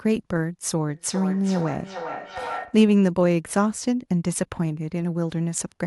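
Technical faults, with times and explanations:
0.89–2.91 s, feedback echo between two devices: the speech returns roughly every 0.4 s, peaking about 11 dB below it, as a nearby device replays the call into a microphone whose echo canceller ignores it. Spectrograms show fainter syllable copies at that spacing.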